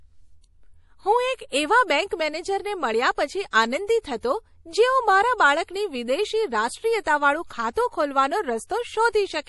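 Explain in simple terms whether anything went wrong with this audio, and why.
Throughout the recording, from the first moment to the last, the speech sounds watery and swirly, as if heard through a thin layer of water. The s sounds come out smeared with a metallic chirp. The likely cause is heavy MP3 compression: to save space, the encoder kept switching quieter details on and off, which produces that bubbling, washed-out quality.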